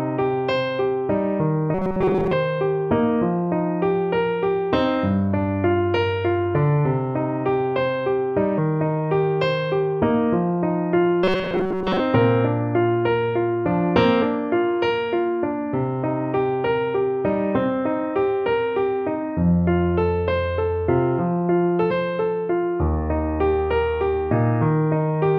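From 1.74 to 2.34 s and again from 11.24 to 12.0 s, the sound turns into a rigid metallic buzz at 188 Hz. This is robotic sound from repeated short buffers, likely caused by re-playing a chunk of about 5 ms while most of the real audio is skipped. Unlike a plain dropout, the buzz keeps a fixed pitch.

At 8.57, 14.21 and 21.90 s, compressed frames are skipped. The audio jumps ahead by about 150, 50 and 200 ms in multiples of 23.2 ms frames.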